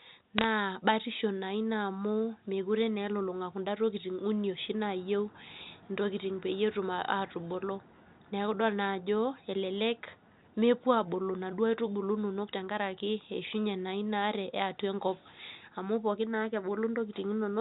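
Right at the start, from 0.38 to 0.45 s, there's a brief burst of bit errors on a digital phone line: crackle over the speech, which sounds like a few corrupted frames at a low error rate. Flipped bits on the G.711 line each knock one sample off, and the loud ticks come from sign or high bits. A single frame of bit errors turns up at 5.58 s, between "oshi naayieu" and "ntokiting peyie etum atubulu".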